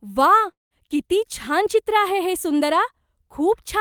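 From 0.51 to 0.74 s the speech smears into a buzzy, fading continuation of the last sound, then falls into a short silence before resuming at "किती छान" with about 0.2 s of audio gone. This is likely a long network dropout, where the receiver stretched the final sound to cover missing data, then gave up.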